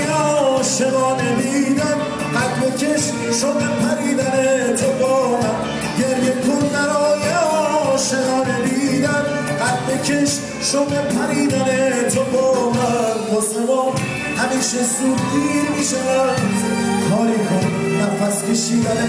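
Nothing technical is wrong with this audio; it's fine to listen to as it is.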